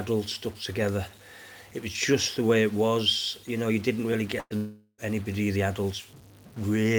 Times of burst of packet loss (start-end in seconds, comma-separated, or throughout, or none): 4.39-4.53